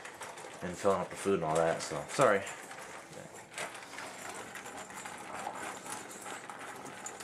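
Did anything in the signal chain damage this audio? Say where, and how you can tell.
No, nothing in the chain from capture through storage to playback leaves an audible mark on this audio.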